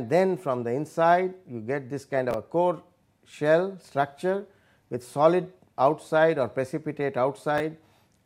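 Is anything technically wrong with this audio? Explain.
Yes. Chunks out of order at 2.31–2.34 s and 7.58–7.60 s: 10 ms blocks played late, two and one chunks behind, giving brief jumbled moments at the hard joins.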